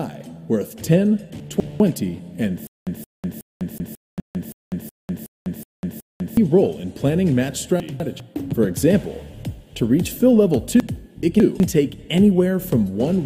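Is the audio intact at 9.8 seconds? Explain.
Yes, the audio at 9.8 seconds is intact, with no dropout, click, distortion or other fault.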